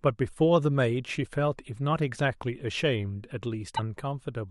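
At 3.75 s the speech skips forward and a 44 ms stretch of chirp, noise burst or short gap sounds until 3.79 s. The likely cause is a broken MP3 bit reservoir: after a cut, the decoder pulled borrowed data from the wrong frame, which fits 26 ms frames. The waveform shows a visible discontinuity.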